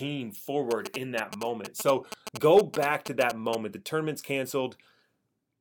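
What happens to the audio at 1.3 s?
At 1.3 s a nearby 2G phone is exchanging signalling bursts with its network, and the audio circuit rectifies that radio energy. The result is GSM signalling bursts, a galloping dit-dit-dit of short 217 Hz buzzes sitting only a little below the speech, from 0.71 to 3.55 s.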